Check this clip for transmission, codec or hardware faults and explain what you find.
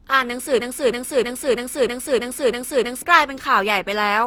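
Two faults are audible in this speech clip: a hollow, degraded texture throughout and a stuck repeating fragment early on.

Generation loss runs through the whole clip. The speech sounds swirly, smeared and hollow, and consonant attacks blur. The likely cause is repeated lossy re-encoding, perhaps around seven passes through an Opus-like codec at roughly 64 kbit/s, each pass quantising on a shifted frame grid so noise piles up.

A broken-record loop runs from 0.60 s to 3.02 s. A 320 ms piece of audio repeats exactly, back to back, eight times, and whatever should have played there is gone. The likely cause is a stalled player, encoder or stream that kept resending its last held fragment.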